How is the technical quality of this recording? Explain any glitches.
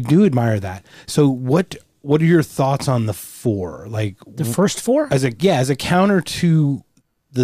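The technical quality of this recording is sound, with no glitches to explain.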